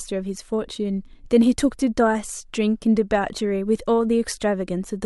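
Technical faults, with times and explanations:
No technical faults can be heard in this speech recording.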